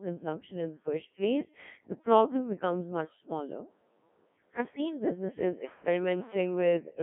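Throughout the clip, the speech has passed through the Codec 2 vocoder at a very low rate, which fits its 1.3 kbit/s mode. The encoder keeps only pitch, voicing, energy and a rough spectral envelope. The decoder rebuilds the voice from sine waves rather than preserving the waveform. The result is heavily damaged speech that sounds robotic and buzzy, squeezed into a telephone-like band between 150 Hz and 3.4 kHz, with natural vocal texture gone.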